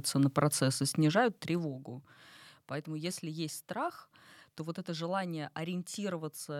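From 0.84 s to 1.86 s the gain drops in unsmoothed 1 dB steps, roughly ten a second, about 15 dB in all. Each jump clicks, so the fade carries audible zipper noise, a fast ticking riding over the speech.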